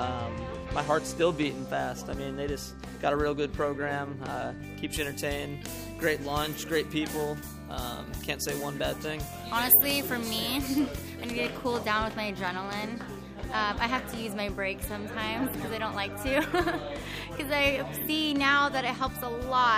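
From 4.93 to 11.32 s, pre-emphasis was left on. A treble boost following the FM 75 µs curve went uncorrected by the matching de-emphasis, leaving 10 kHz about 14 dB above 1 kHz. Across that stretch the sound turns thin, bright and sibilant.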